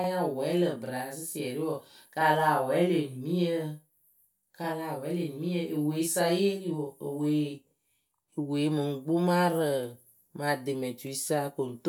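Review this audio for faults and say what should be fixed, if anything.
From 0.00 s to 8.32 s the speech carries a channel delay (doubling): every syllable is followed by a second copy of itself at the same level, trailing by about 40 ms. One channel is running late by a full buffer's worth of time, and when the two are summed to mono the late copy no longer blends in. It is heard as a distinct slap. The doubling stops after 8.32 s. Keep both channels on a shared clock and buffer path, and check mono sums for inter-channel offset before mixing down.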